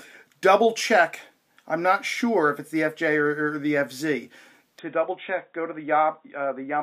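An input switched to a poorer device at 4.79 s, and the change holds to the end. From that moment the sound turns dull and boxy, with nothing above 3.8 kHz, drops by about 5 dB, and carries a faint new background noise well below the signal. The switch is instant, with no gap. This is likely the recording moving to a lower-quality microphone or a headset's narrowband call profile.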